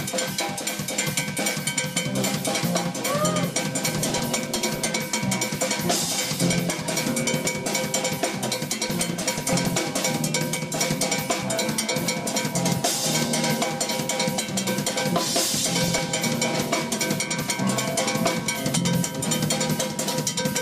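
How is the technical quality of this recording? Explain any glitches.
The recording has five patches of DAB burbling, at 3.97–4.85 s, 6.46–6.56 s, 8.80–9.79 s, 10.56–11.05 s and 15.44–16.11 s. Weak reception let bit errors slip past error correction into the MP2 audio data, around half a percent, and lower in the brief 6.46 s patch. The corrupted samples put short blips of noise into individual frequency sub-bands, giving a burbling texture.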